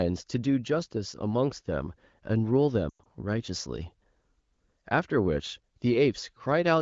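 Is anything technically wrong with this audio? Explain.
Yes. Between 2.90 and 3.06 s there are lost AMR speech frames: the decoder repeated its last good parameters with falling gain, so the speech briefly warbles and fades.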